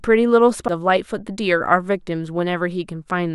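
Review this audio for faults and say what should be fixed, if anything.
A CD skip at 0.68 s in this speech. There is a brief tick and a near-silent gap of a few milliseconds. A knock or a flaw in the disc made the laser jump onto another turn of the disc's spiral, so playback resumes from a different point. Clean or replace the disc and isolate the player from vibration before re-ripping.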